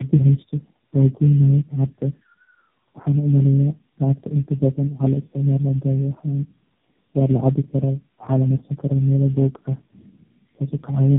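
Speech here suffers tandem speech coding throughout: three low-rate speech codecs in a row, each re-coding the last one's damage, so it's rough, warbly and muffled, with nothing above 3.7 kHz.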